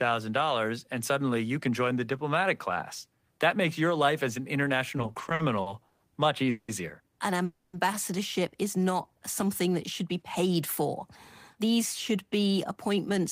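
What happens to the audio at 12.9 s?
At 12.9 s the jitter buffer speed-up is under way, running from 11.55 to 13.19 s: the buffer had built up too much audio, so the receiver repeatedly cut out short pitch-period slices, about a tenth of a second in total. The speech plays about 7% fast at unchanged pitch, sounding slightly hurried.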